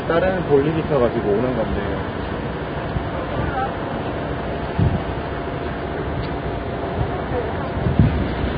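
Heavy Vorbis compression is the likely cause, at a very low bitrate near 16 kbps. Throughout, nothing remains above about 4.9 kHz, and the treble turns into hissy, grainy noise with smeared attacks.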